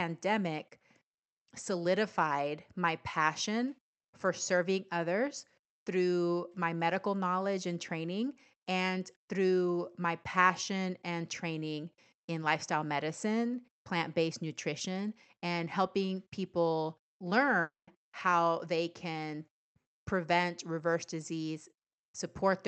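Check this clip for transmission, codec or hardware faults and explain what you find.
There's one clear break, a long network dropout from 17.61 to 17.89 s. About 260 ms of audio simply never arrives. The receiver smears the last sound into a fading buzz, then roughly 170 ms goes near-silent before the audio picks up again, skipping the lost part. The likely cause is packets lost in transit.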